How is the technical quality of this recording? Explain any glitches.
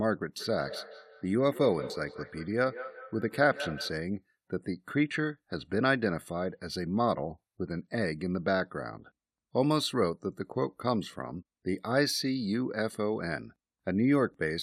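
The recording has one clear glitch early on. From 0.37 to 4.05 s, feedback echo between two devices repeats the speech at a steady interval of roughly a fifth of a second, peaking about 13 dB below it. Another device in the room replays this microphone's sound, which the microphone picks up again. The evenly spaced, thinning repeats distinguish it from room reverberation's smooth tail.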